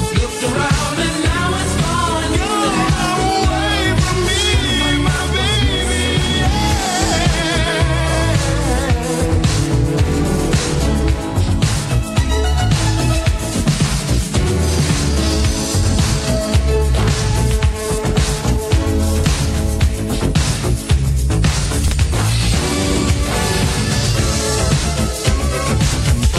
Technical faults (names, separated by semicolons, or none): chunks out of order